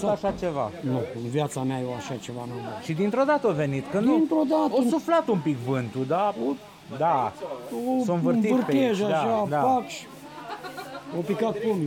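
No technical faults can be heard in the audio at any point.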